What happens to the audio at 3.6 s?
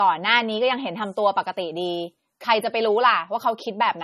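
At 3.6 s the speech still carries the dull, swirly quality it has from start to finish, with nothing at all above about 14.2 kHz. That's most likely low-bitrate audio saved at a high bitrate: an MP3 squeezed hard, which fits something around 32 kbit/s, then re-encoded at a generous rate. The bigger second pass can't bring back the detail the first one threw away, so the smearing and the top-end cut-off stay.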